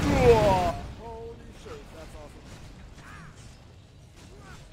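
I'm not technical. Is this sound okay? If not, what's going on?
No, there are two problems. From 0.3 to 1.12 s there's zipper noise: the volume is turned down a good deal, but in small jumps about fifteen times a second instead of a smooth slide, and each jump ticks, so you hear a faint zipping.

There's also damaged data in the compressed stream, at 0.66 to 0.72 s and again at 2.97 to 3.02 s. Part of the stored file is corrupted there. The player can't read it and skips ahead to the next good piece, so you get a brief chirp or blip.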